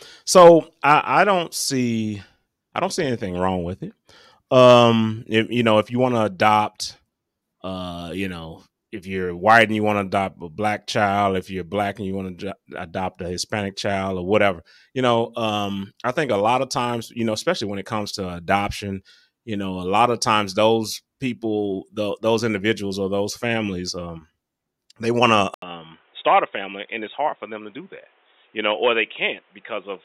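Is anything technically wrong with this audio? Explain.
Yes. At 25.54 s, just after "they want", the input likely switched to a poorer device. An 80 ms silence precedes duller, boxier sound with nothing above 3.8 kHz, a few decibels less level, and new background noise about 35 dB down. A spectrogram shows a blank column, then a hard 3.8 kHz ceiling, and the waveform shrinks slightly.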